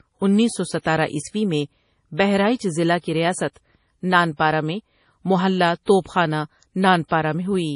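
MP3 compression runs through the whole clip, and it is heavy. Nothing sounds above 10.6 kHz, so the speech has lost its top octave and sounds dull. The likely cause is an MP3 encoder starved of bits, at a rate that fits roughly 32 kbps. It has cut the treble outright and discarded quieter spectral detail, letting components flicker between frames. The result is a watery, swirling texture across the voice, and consonant onsets lose their crispness.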